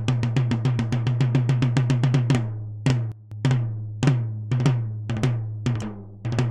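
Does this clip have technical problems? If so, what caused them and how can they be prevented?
Yes. From 3.12 s to 3.32 s there is a sudden gain jump: the whole signal, background noise included, drops by about 14 dB at once and returns just as abruptly about 0.2 s later. This is likely a digital gain change applied from one sample to the next with no ramp. The waveform shows a sharp rectangular dip in the envelope, and a spectrogram shows a uniformly darker vertical band across all frequencies. To prevent it, apply gain changes through a short smoothed ramp.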